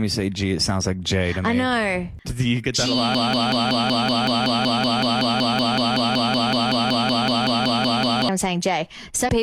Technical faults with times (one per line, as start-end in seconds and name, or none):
3.15-8.29 broken-record loop
9.24-9.29 damaged data in a compressed stream